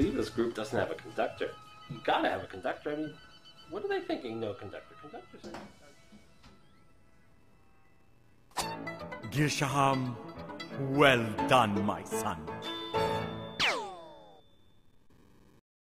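Damaged data in the compressed stream at 13.59 s: corrupted bytes make the decoder misread a frame and lose sync, producing a brief blip before decoding resumes.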